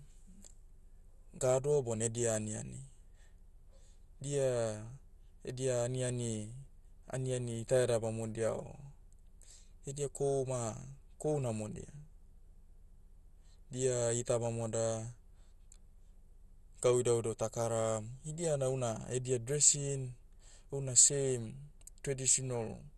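Speech, carrying MP2 compression artefacts from start to finish. Upper bands are switched off, so the top of the spectrum is missing and the sound comes across dull. The remaining upper bands flicker in and out while the sub-bands still active are coarsely quantised, giving a gurgling, granular distortion on the speech that is plainly audible. The likely cause is MPEG Layer II encoding starved of bits, consistent with a rate around 64 kbps.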